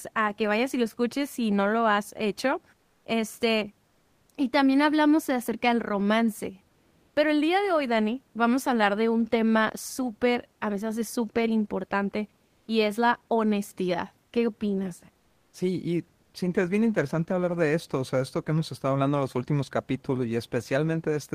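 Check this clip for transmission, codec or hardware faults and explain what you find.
Two kinds of fault appear in this speech: comfort noise in place of the background during four pauses, and a block size mismatch (truncated) late in the clip.

Comfort noise in place of the background occurs at 2.79–3.03 s, 6.71–7.15 s, 12.47–12.67 s and 15.19–15.51 s. The genuine room noise, sitting about 41 dB below the speech, gives way to smooth synthetic hiss, likely from Opus DTX filling gaps the sender skipped. Levels shift by about −2, +1, −1 and −2 dB. On a spectrogram, textured background turns into a uniform, detail-free wash.

The block size mismatch (truncated) runs from 16.68 to 18.30 s. Each block's tail is discarded before the next stage reads it, leaving a seam roughly every 10.9 ms. That produces a buzz at about 92 Hz. Tempo stays essentially normal, so very little is lost per block. 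Spectrograms show evenly spaced vertical striations, and the waveform shows regular tiny discontinuities.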